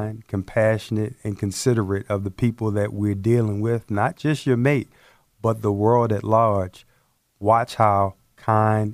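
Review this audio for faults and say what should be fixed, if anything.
No faults turn up in this speech audio, so nothing needs to be fixed.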